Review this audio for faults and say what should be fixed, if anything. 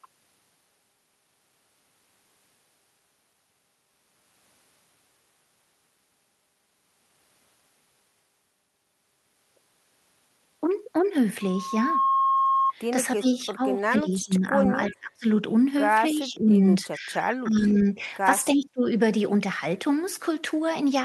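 Loudspeaker feedback squeal: the microphone picked up its own loudspeaker, and the loop gain passed unity at 1.1 kHz. A pure tone swells over roughly half a second from 11.41 s to a howl about as loud as the speech, lasting until 12.73 s. Prevent it by lowering loudspeaker gain, moving the microphone away, or notching 1.1 kHz.

Speech suppressed in double talk: the echo canceller likely mistook overlapping talk for echo and turned the near voice down. The voice dips and breaks up from 13.18 to 15.26 s (up to around 25 dB), 16.12 to 18.03 s (around 15 dB), and 18.55 to 18.86 s (around 35 dB). Prevent it with a canceller that detects double talk properly instead of ducking.

Echo leak: the far end's echo canceller likely let part of its loudspeaker pickup through. Short delayed copies of the voice return 307 ms late, about 20 dB down, at 14.87 to 14.94 s and 17.74 to 17.89 s, and about 25 dB down at 18.56 to 18.62 s. 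Prevent it with headsets at the far end or a better-converged echo canceller.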